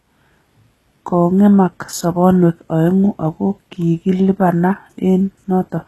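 Speech with plainly audible HE-AAC compression throughout, likely from a very low bitrate: s sounds turn gritty and metallic, and a spectrogram shows patchy, copied-looking treble cut off sharply at 12.3 kHz.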